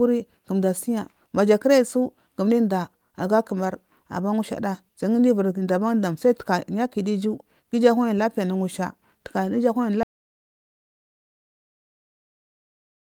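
At 10.03 s the speech cuts off mid-flow and the clip stays in total silence until the end, about 3 s later. This audio dropout to silence most likely comes from the input being lost, with the recorder still writing silence. No room tone survives the gap. On a waveform the trace collapses abruptly to a flat line, and a spectrogram shows a hard vertical edge followed by an empty black region across all frequencies.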